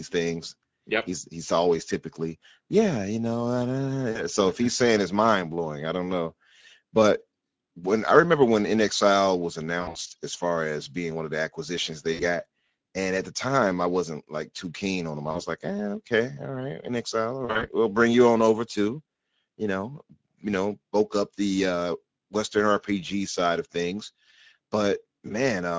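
Speech with a hoarse, noisy grain throughout, the plainly audible damage of the Speex codec running at about 16.8 kbps. Brief smeared dropouts that fade and leave the voice weak or distorted come at 4.11 to 4.23 s, 9.81 to 10.10 s, 12.13 to 12.24 s, 15.31 to 15.41 s and 17.45 to 17.66 s. This is VoIP packet loss concealed by the speech codec: the decoder extrapolates lost audio, about 40 to 180 ms per event, from its last pitch and filter.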